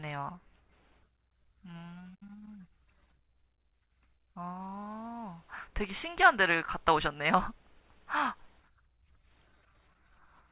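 No technical faults are audible.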